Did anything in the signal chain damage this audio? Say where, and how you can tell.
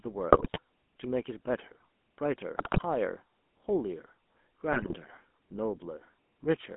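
Yes. The codec stage damaged the whole clip. The speech has the buzzy, gravelly roughness of the GSM full-rate codec, which fits a 13 kbps GSM full-rate call. It rebuilds the voice from a vocal-tract filter driven by a sparse, regularly spaced pulse excitation, so the fine detail of the voice is lost. On a spectrogram the energy sits between 200 Hz and 3.4 kHz with nothing above, and the harmonics look smeared and grainy.

The network link added three bursts of GSM bit errors, at 0.32 to 0.59 s, 2.58 to 2.83 s and 4.72 to 4.97 s. Each lasts about a quarter of a second. Corrupted bits reached the decoder, and wrong filter, pitch or gain values distorted the spectrum and threw the level around from frame to frame. The speech breaks into squawks, pops and gargling. A waveform shows sudden level spikes, and a spectrogram shows short blocks of misplaced energy at 20 ms frame boundaries.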